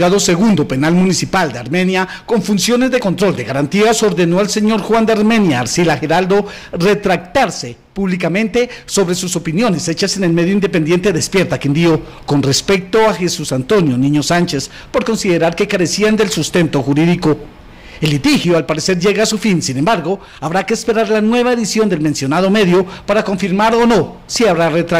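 Hard clipping runs through the whole clip. The signal reaches the stage that overloads at about 11 dB beyond what it can pass, so every peak above that ceiling is cut flat, and around a tenth of all samples sit pinned at the limit. The squared-off tops add harmonics high in the spectrum. With an overload this large, the result is a continuous harsh fuzz on every loud passage rather than occasional crackle.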